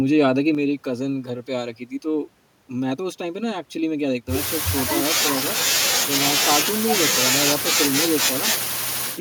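One stereo channel likely drops out at 0.55 s and stays lost to the end of this speech recording, so after the mono sum the speech level falls abruptly by about 6 dB, and anything carried only in the missing channel vanishes for the remaining stretch.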